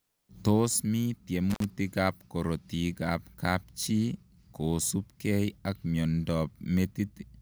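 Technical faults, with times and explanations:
1.5–1.64 s, intermittent contact: the speech cuts out for about 60 ms as a loose connection briefly opens, with scratchy crackle at both edges and faint hiss in the gap. A digital dropout would give clean, abrupt silence rather than this crackle and hiss.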